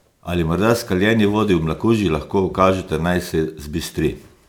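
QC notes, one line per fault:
Throughout, generation loss: the speech has a swirly, hollow, smeared quality beyond what one lossy pass would leave, and consonant attacks blur. It likely went through MP3 around five times, each pass adding fresh quantisation noise and spectral holes, which fits roughly 128 kbit/s.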